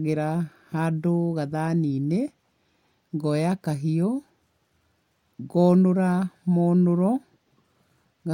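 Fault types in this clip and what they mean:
No faults detected here.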